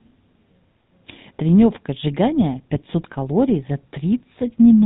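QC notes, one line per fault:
throughout, GSM full-rate codec: speech is plainly buzzy and gravelly with nothing above 3.9 kHz, as coarse regular pulses drive a vocal-tract model; fits 13 kbps.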